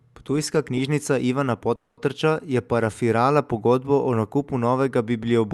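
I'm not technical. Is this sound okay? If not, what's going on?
No. From 1.75 to 2.00 s there's a call audio freeze: the speech stalls into a fading buzz, likely from delayed network packets, then resumes exactly where it stopped, so nothing is skipped.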